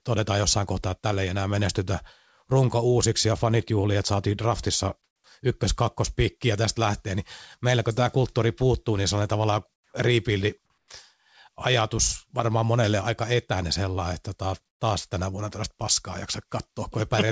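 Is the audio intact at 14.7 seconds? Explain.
No. From 14.68 to 14.80 s, a 120 ms stretch just before "taas tänä vuonna tällaista", the real room background gives way to a flat, featureless hiss about 15 dB quieter, then the natural background returns with the speech. This is comfort noise in place of the background, likely from discontinuous transmission: the sender's voice detector judged the gap silent and stopped sending audio, and the receiver filled it with synthetic noise roughly shaped like the background.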